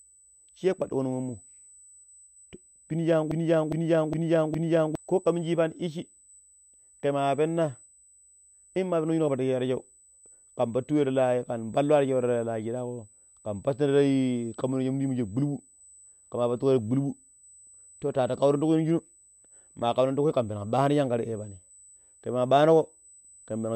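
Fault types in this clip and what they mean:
USB whine: A thin, steady tone sits at 8 kHz under the whole clip, at about 30 dB below the speech. That pitch lines up with the 125 microsecond microframe timing of a USB bus, so current drawn by the interface is leaking into the audio path through power or ground. It's fixed in pitch and never lets up, which makes it easiest to catch in the gaps between phrases.
broken-record loop: From 3.31 s to 4.95 s, a slice of audio about 410 ms long plays four times back to back, identical on every pass, and then the clip carries on with "ko ka minji". That stutter is the likely result of the player or stream stalling and resending the last fragment it was holding. Whatever speech should have filled those 1.6 seconds is lost.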